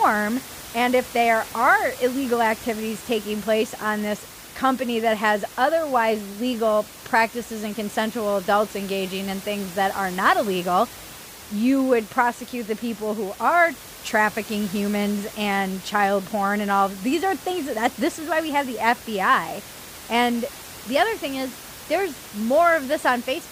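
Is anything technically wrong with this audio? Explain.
No, nothing technically wrong shows up in this speech recording. The room noise is audible in the background at about 17 dB below the speech, which belongs to the recording space rather than any fault in the system.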